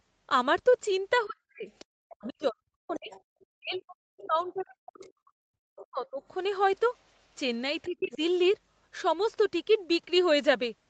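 A speech recording from a call, band-limited with nothing above 8 kHz. It shows speech suppressed in double talk from 1.24 to 5.36 s, at 5.9 to 6.21 s and at 7.88 to 8.21 s. The talker dips or cuts out in pieces, by up to about 40 dB in the first stretch. The likely cause is an echo canceller turning everything down while both sides spoke. The other side's voice also leaks through, from 1.79 to 5.07 s, at 5.76 to 6.08 s, 6.96 to 7.13 s and 7.84 to 8.17 s. It sits roughly 20 to 40 dB below the talker. This is probably loudspeaker echo the canceller failed to remove.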